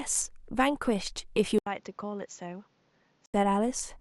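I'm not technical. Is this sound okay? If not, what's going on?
No. From 1.59 to 3.34 seconds, the system likely had its input switched to a poorer device. After a brief gap at the switch, the speech turns duller and quieter, loses its highest sounds, gains faint background noise, and then clears up again.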